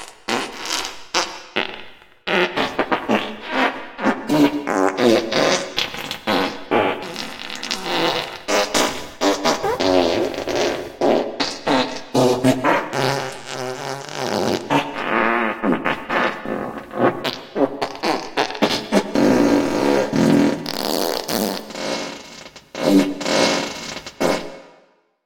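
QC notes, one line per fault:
No faults heard.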